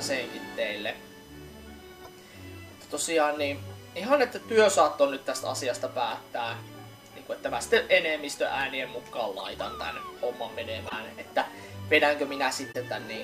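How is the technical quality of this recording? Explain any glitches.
The recording has two faults: a steady whine and five brief glitches.

A USB whine runs throughout. It is a fixed 1 kHz tone, strongest at its 3 kHz multiple, roughly 30 dB below the sound. Current drawn in USB's 1 ms frames leaks in through power or ground.

There are five corrupt frames decoded, at 2.04–2.07, 6.66–6.69, 9.39–9.48, 10.84–10.95 and 12.72–12.76 s. Damaged compressed data was played anyway. This put energy at the wrong frequencies, heard as short chirps or bursts. The longer bursts near 9.4 and 10.9 s are loudest and suggest several frames were hit in a row.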